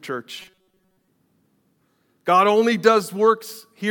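Robotic sound from repeated short buffers, 0.38 to 1.08 s: the speech turns into a rigid, metallic buzz pitched at 188 Hz. The likely cause is late-arriving audio, so a slice of about 5 ms is looped over and over, replacing most of the real signal.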